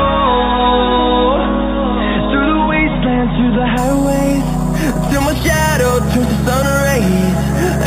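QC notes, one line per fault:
3.78–7.86 s imaging from sample-and-hold upsampling: unsmoothed repeated samples mirror the spectrum into 4–8 kHz at about -17 dB, heard as metallic fizz; spectrogram shows flipped bands above 4 kHz.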